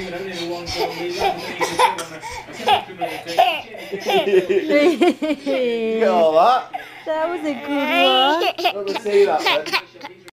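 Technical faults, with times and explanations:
Nothing stood out as a technical problem on listening.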